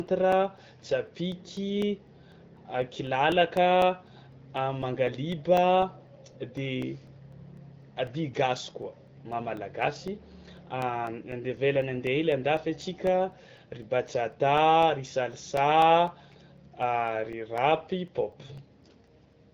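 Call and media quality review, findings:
Periodic USB or driver dropouts: regular ticks throughout the speech, 0.07 to 19.33 s, every 0.25 s, about 70 in all. Each is a roughly 2 ms gap filled with silence, likely a host task stalling the USB bus or audio driver on a fixed schedule. Waveform: evenly spaced flat notches. Spectrogram: thin full-band vertical lines, visible only where speech is present. The AMR-WB (HD Voice) path at 12.65 kbit/s is audible as a band limit near 7.5 kHz.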